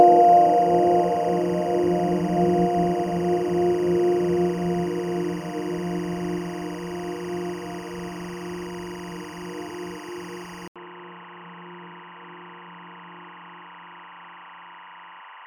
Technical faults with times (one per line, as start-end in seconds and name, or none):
0.00-15.46 timecode bleed
10.68-15.46 input switched to a poorer device